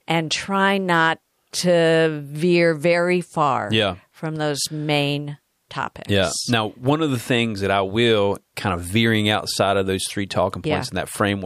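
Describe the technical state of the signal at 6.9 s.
At 6.9 s the speech signal is intact, with no dropout, click, distortion or other fault to be heard at that point.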